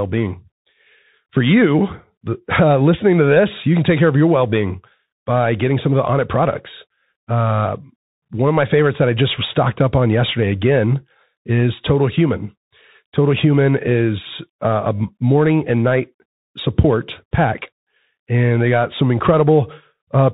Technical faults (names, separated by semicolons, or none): Bluetooth CVSD headset codec